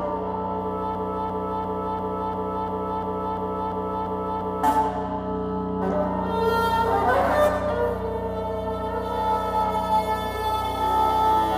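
From 0.95 s to 4.64 s the audio falls into a broken-record loop: a fragment about 0.35 s long plays 11 times in a row, each repeat identical and butted directly against the last, and whatever should have sounded in those seconds never arrives. The likely cause is a player, encoder or stream that stalled and kept resending its last buffered piece. Unlike an echo or reverb tail, the copies don't fade or blur, and unlike a brief stutter it persists for several seconds.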